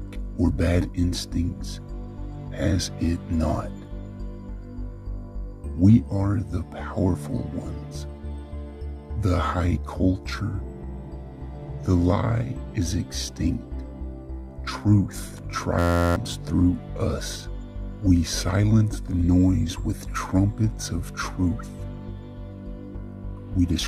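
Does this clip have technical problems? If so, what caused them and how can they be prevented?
Yes. From 15.79 to 16.16 s the sound collapses into a steady buzz at 86.1 Hz. This is a system hang loop: the computer or driver froze while the audio hardware kept replaying one 11.61 ms slice, which fits a 512-sample buffer, so about 0.4 s of audio is lost. Running audio at high priority and using drivers that mute the output when the system stalls prevents it.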